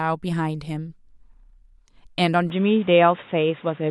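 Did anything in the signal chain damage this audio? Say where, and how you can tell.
Yes. The damage sits at the input stage, where the capture device changed. From 2.50 s to the end, the speech turns dull and boxy. Nothing is left above 3.8 kHz. There is no gap at the switch, and the level stays about the same. A new background noise appears, sitting roughly 30 dB below the speech. This is likely an input switched to a poorer device, such as a headset's narrowband call profile, with its own tone and noise floor.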